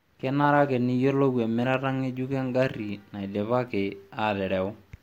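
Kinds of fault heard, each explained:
Block of digital silence: at 3.68 s the speech drops to silence for 0.67 ms, the kind of gap a 32-sample output block leaves when not filled in time. It is heard as a tick or dip. The waveform shows a flat sliver, the spectrogram a thin full-height vertical line.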